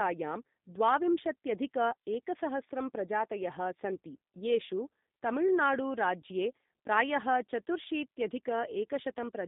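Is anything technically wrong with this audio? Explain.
Yes. The speech has passed through a G.729 codec for its whole length. The sound points to the 8 kbit/s G.729A variant. This codec does not store the waveform. It rebuilds each 10 ms frame from a vocal tract filter, a pitch predictor and a few pulses. The band is cut to about 150 Hz to 3.7 kHz, so the sound is thin and muffled. The coding damage is plainly audible, giving a rough, buzzy, synthetic edge.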